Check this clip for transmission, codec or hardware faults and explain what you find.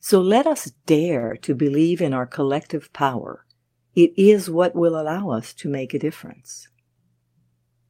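Two transmission faults sit close together in this speech, both just after "let us".

From 1.19 to 1.25 s there is a short stall from a late packet. The packet carrying the next stretch of audio had not arrived when it was due, so the jitter buffer ran dry and the receiver prolonged the last sound for about 34 ms until the packet showed up, then resumed exactly where it left off. Nothing is lost, but the sound right after "let us" hangs on a touch too long, and everything after it plays 34 ms later than before.

From 1.27 to 1.31 s comes a short concealed packet loss. This time about 20 ms of audio never reached the decoder in time. The receiver covered part of the gap by carrying the previous sound forward for about 18 ms, extending its pitch if it was voiced or filling with shaped noise if not, then cross-faded back into the real signal. The result is a brief smear or wobble where a small piece of sound has gone missing.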